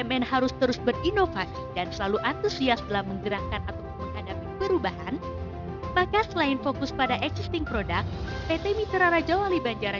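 Aliasing runs through the whole clip. The audio appears to have been downsampled, which fits a drop to a 12 kHz rate, without a low-pass filter first, so content above 6 kHz folds back below it to unrelated frequencies. The folded energy sits roughly 20 dB under the main signal and gives high sounds a gritty, metallic edge. A spectrogram shows mirrored traces running the wrong way and energy packed hard against a 6 kHz ceiling.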